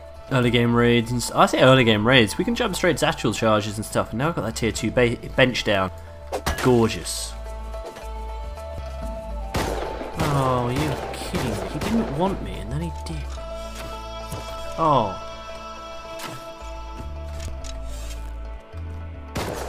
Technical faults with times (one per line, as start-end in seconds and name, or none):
2.98 audio missing between chunks
5.88 audio missing between chunks
8.78 audio missing between chunks
14.58 audio missing between chunks
17.48 audio missing between chunks